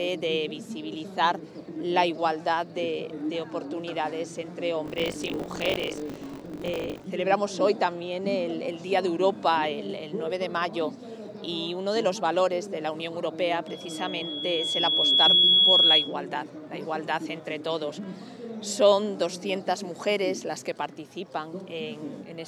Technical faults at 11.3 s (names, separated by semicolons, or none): none